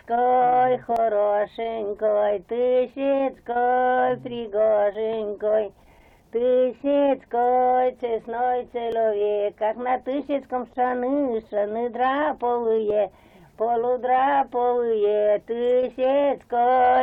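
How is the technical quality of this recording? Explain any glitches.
The recording has one recurring glitch. An overlap between stream segments at 0.96, 4.95, 8.92 and 12.90 s trims a few milliseconds at each 4-second segment join, so the waveform jumps.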